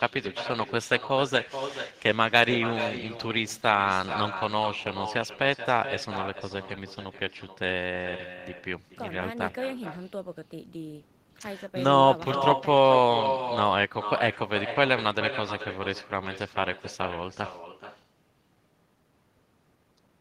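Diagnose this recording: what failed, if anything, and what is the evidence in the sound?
Call processing: echo with no canceller. Throughout, speech returns around 400 ms later, about 10 dB down. The far loudspeaker leaks into its microphone unremoved.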